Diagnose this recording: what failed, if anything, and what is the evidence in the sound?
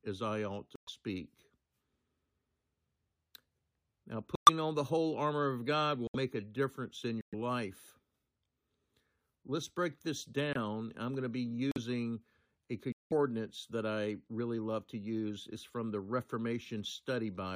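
The codec stage failed, with corrupt frames muted. The speech drops to abrupt silence at 0.76–0.89, 4.35–4.49, 6.07–6.16, 7.21–7.34 after "a difference in", 10.53–10.56 after "break this", 11.72–11.78 after "I'm going to be", and 12.92–13.12 s. The decoder rejected damaged frames and the player filled the gaps with silence while timing held.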